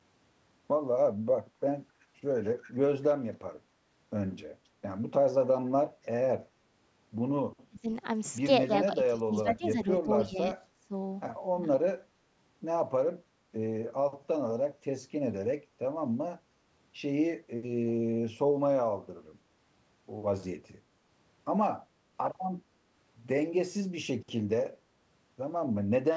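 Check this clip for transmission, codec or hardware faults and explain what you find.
Two kinds of fault show up, both likely from the echo canceller on the loudspeaker side of a speakerphone call: echo leak and speech suppressed in double talk.

Echo leak appears at 2.0 to 2.05 s, 2.43 to 2.72 s, 9.04 to 9.18 s and 10.15 to 10.23 s. A faint, delayed copy of the speech comes back about 274 ms after the original, which is likely residue the canceller failed to subtract from the loudspeaker pickup. These scraps sit roughly 20 to 40 dB below the direct speech. On a spectrogram they look like weak ghost harmonics trailing the real ones by that fixed offset. In the waveform they are low-level ripples.

Speech suppressed in double talk hits at 7.69 to 7.85 s, across 8.86 to 10.94 s, and at 11.51 to 11.65 s. While both sides talk, the canceller likely can't tell the near talker from echo and turns everything down, dipping the speech by up to about 20 to 25 dB. 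The short events last around 150 ms each, and the long stretch loses roughly a second in pieces. The waveform shows notched, pumping envelopes. The spectrogram shows the upper harmonics thinning or vanishing in patches.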